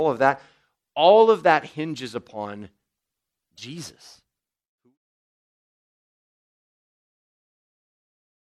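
At 3.54 s there's a burst of damaged data in the compressed stream, lasting to about 3.58 s. Bad bytes there left the decoder misreading frames and hunting for the next header, so you get a brief chirp, squawk, click or gap before the fade-out that starts around 4 s.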